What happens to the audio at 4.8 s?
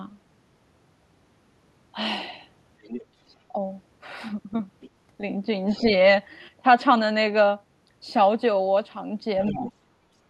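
From 4.81 to 4.90 s the other side's voice leaks through: a faint, brief second voice, not the talker's own echo, likely left by the echo canceller.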